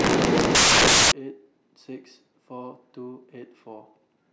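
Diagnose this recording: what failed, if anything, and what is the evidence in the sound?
The sample-format conversion stage failed: samples are built from the wrong bytes. From 0.00 to 1.12 s the speech is replaced by loud broadband noise. Misassembled bytes push the rapidly changing low-order bits into the most significant positions, so each value becomes essentially random.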